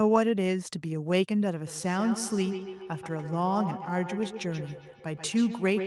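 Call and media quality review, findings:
Repeating, increasingly thin and ringing copies of the speech from 1.67 s to the end, peaking about 10 dB below the direct speech, spaced roughly 150 ms apart. Feedback echo between two devices: a second device in the room replays what the first device's microphone sent, the microphone recaptures it, and the local echo canceller cannot remove playback from the other device.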